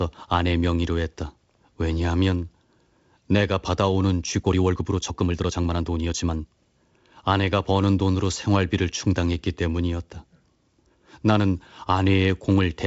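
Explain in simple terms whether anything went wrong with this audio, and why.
Between 4.35 and 6.63 s there's a time-stretched section. The software likely squeezed that stretch to fit a shorter length, playing it about 1.37 times faster and dropping tiny slices so the pitch wouldn't rise. You hear the speech suddenly hurry along at the same pitch, rushed, then drop back to its normal pace. The wideband telephone coding (G.722) working underneath is audible as a ceiling on the sound around 7 kHz.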